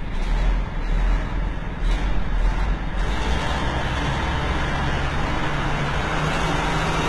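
From start to finish the sound carries heavy codec damage, most likely HE-AAC compression. The treble stays bright but feels synthetic: upper detail is copied up from lower bands rather than kept, so it turns gritty and metallic, with harmonics that fail to line up across the crossover. The damage level fits a bitrate around 16 kbps. A spectrogram shows a hard ceiling at 11.8 kHz and blocky, repeated-looking texture in the replicated upper band.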